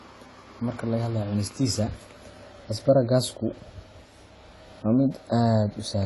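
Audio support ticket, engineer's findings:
Speech dull and smeared throughout, warbly fizz on sibilants, nothing above 11.5 kHz. Likely AAC compression: AAC-LC encoder quantising spectral lines coarsely, dropping cut-off and leaving holes between bands. Plainly audible damage, consistent with a low bitrate near 32 kbps.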